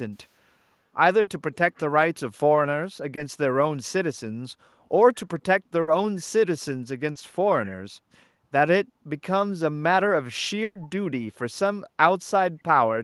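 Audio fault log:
1.21–1.29 s, 5.81–5.89 s, 10.63–10.77 s: burst of packet loss. Several packets in a row arrived too late or not at all. The receiver stretched the last sound and faded it, about 60 ms each time at first, 120 ms at 10.63 s. Playback then skips ahead past the missing audio.
1.75–1.80 s: echo leak. A faint copy of the speech comes back about 221 ms late, far below the main voice. Likely a far-end loudspeaker whose echo canceller let some of its own playback through to the microphone.
3.15–3.19 s, 7.11–7.17 s: short concealed packet loss. Brief holes of about 20 ms and 40 ms were patched by continuing the preceding sound, then blended back into the real audio. Each gap is heard as a quick smear or wobble.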